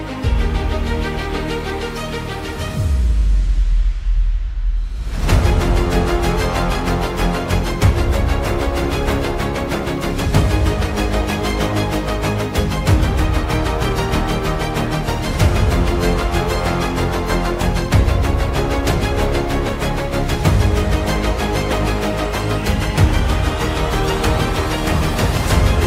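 No technical faults can be heard anywhere in this audio.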